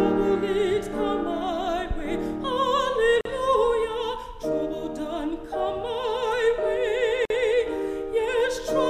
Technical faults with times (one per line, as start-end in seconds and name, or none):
3.21-3.25 gap at a join of encoded pieces
7.25-7.30 gap at a join of encoded pieces